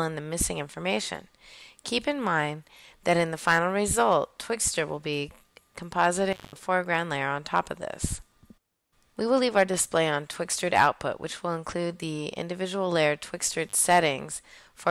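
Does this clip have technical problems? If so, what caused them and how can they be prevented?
Yes. An intermittent contact, where a loose cable or plug briefly opens the connection, breaks the signal twice: 6.32 to 6.56 s (about 170 ms open) and 13.67 to 13.73 s (about 46 ms). The sound drops out with crackle at each edge, leaving faint hiss. Reseating or replacing worn cables and connectors, and securing them against movement, prevents this.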